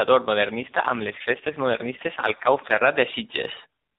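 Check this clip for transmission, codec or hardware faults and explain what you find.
One codec fault is audible, an AMR rate drop from 0.56 s to 2.83 s. The speech is carried by the AMR narrowband mobile codec, band-limited below 4 kHz with only light coding damage at its normal rate. During that stretch the encoder switches to a much lower mode, which fits a step from 12.2 kbps down to 4.75 kbps, as happens when a weak radio link diverts bits to error protection. The bandwidth stays the same and nothing drops out, but the voice turns rougher, buzzier and more synthetic until the higher rate returns at 2.83 s.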